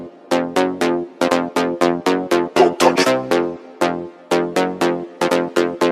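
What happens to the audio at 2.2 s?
Nothing goes wrong at 2.2 s; the audio plays through that moment intact, with no dropout, click or distortion.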